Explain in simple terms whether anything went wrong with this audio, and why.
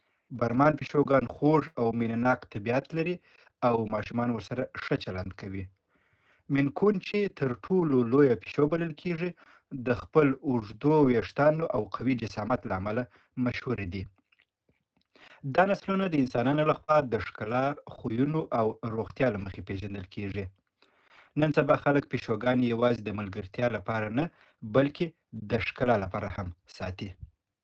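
Several things went wrong, all from pieces of the call going missing on the way.

The most frequent is a lost packet rebuilt from error correction: thirteen times between 1.43 and 16.92 s, bunched around 1.4 to 3.1 s, with others near 6.8 to 7.7 s and 16.4 to 16.9 s. Each time about 40 ms of sound was lost, and a cheaper backup copy carried in the next packet was played instead. Nothing drops out, but those moments turn briefly rougher and noisier. The lack of any gap is what separates these from the other two faults.

A burst of packet loss hits from 1.67 to 1.78 s. Here no backup existed, so the receiver stretched the last sound for about 76 ms and let it fade, giving a short held buzz or hiss. When the sound returns, about 80 ms of the real audio is simply gone, so it jumps forward. That skipped stretch is the difference from a rebuilt packet.

A short concealed packet loss falls at 16.84 to 16.91 s, overlapping a rebuilt packet. 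About 40 ms was missing and was filled by continuing the previous sound, which is heard as a quick smear or wobble. It is far shorter than the burst, so it does not become a sustained fading tail.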